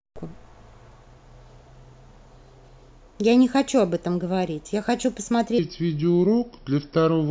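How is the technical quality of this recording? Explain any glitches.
One glitch stands out: a section at the wrong speed from 5.59 s to the end at 7.30 s. The speech drops to about 0.76 times normal speed, so pitch falls about five semitones and the voice turns deep and slow, likely from playback against a mismatched clock.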